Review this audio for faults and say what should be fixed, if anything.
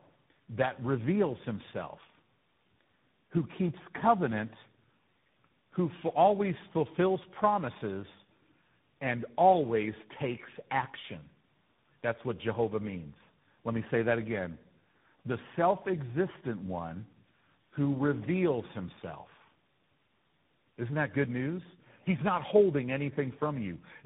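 Tandem speech coding throughout: the speech sounds rough, muffled and warbly, with nothing above 3.8 kHz, consistent with roughly three successive speech codecs each re-encoding the previous one's degraded output. Prevent it by keeping one codec end to end, using transcoder-free operation across links.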